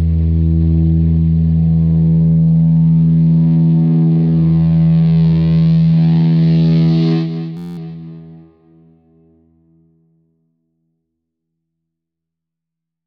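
At about 7.57 s the audio locks into a system hang loop for roughly 0.21 s, ending near 7.78 s. One 11.61 ms slice repeats exactly, 18 times over, so instead of a stutter you hear a steady buzz at about 86.1 Hz. That's the sound hardware cycling through the same ring buffer while the computer or driver froze, and the loop length fits a 512-sample buffer. Once it recovers, the audio picks up with essentially nothing skipped.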